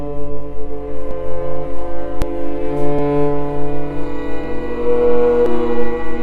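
Abrupt forward jumps in the music occur at 1.11, 2.22, 2.99, 4.44 and 5.46 seconds. There is no gap: each time, a short stretch is simply missing, about a tenth of a second at the first and third points, somewhat more at the second and fourth, and nearly a third of a second at 5.46 s. This is likely a dropped buffer (overrun), where the recording software fell behind and the hardware overwrote blocks it had not yet read.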